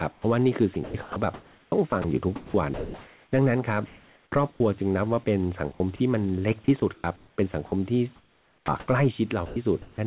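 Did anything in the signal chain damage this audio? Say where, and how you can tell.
Yes. The speech is chopped by the voice detector in call processing, at 0.12–3.32, 3.86–4.6, 5.72–6.0, 6.64–8.88 and 9.46–9.98 s. Syllables drop into synthetic hiss, likely comfort noise filling detector gaps.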